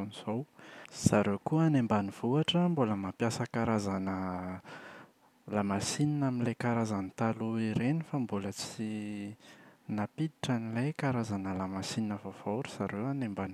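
No technical faults can be heard anywhere in this speech recording.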